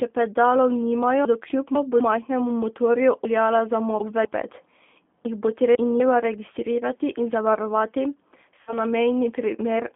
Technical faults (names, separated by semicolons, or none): G.729 codec; VoIP packet loss concealed by the speech codec